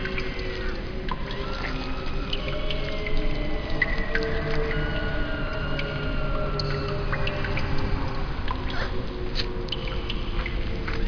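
Nothing goes wrong anywhere in this recording of sounds, so there's no technical fault to point to at any moment.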